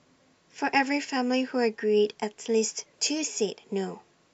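A short recording of speech makes up the clip. No technical fault can be heard anywhere in it.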